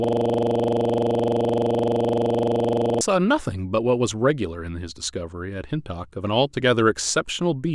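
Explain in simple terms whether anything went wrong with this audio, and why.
From the very start until 3.01 s, a tiny 43 ms slice repeats about 70 times as a rapid buzzing stutter. This is a system hang loop: the computer froze while the sound hardware kept replaying its buffer.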